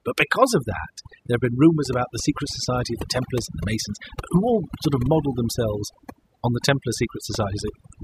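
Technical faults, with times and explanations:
Throughout: overdone noise removal. Over-aggressive suppression gates bands near the noise floor, leaving near-silent gaps with twinkling specks and a spectrogram of isolated blotches.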